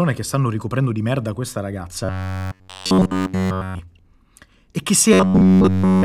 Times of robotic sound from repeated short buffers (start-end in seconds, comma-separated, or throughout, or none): 2.05-3.79, 5.13-6.05